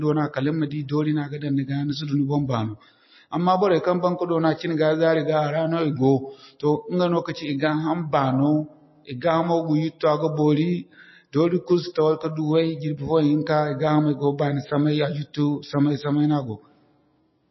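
Speech throughout shows MP3 compression: nothing above 5.8 kHz and a plainly watery, swirly texture, likely from a low bitrate encode, something like 24 kbps.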